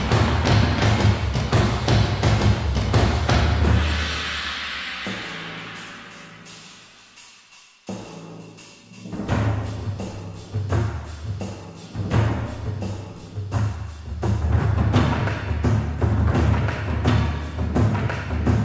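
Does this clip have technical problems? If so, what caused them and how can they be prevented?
No, nothing here points to a technical problem, so there's nothing that needs fixing or preventing.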